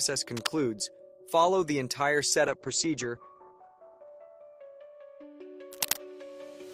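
From 0.37 to 0.53 s, and again from 5.72 to 5.98 s, bursts of scratching noise rise to about 5 dB below the level of the audio and then to the full level of the audio. This cable scratch noise is likely a worn contact being moved. From 2.49 to 5.55 s, a call bitrate drop muffles the sound. The top falls from 20 kHz to 8 kHz, which fits a cut from roughly 32 to 10 kbps.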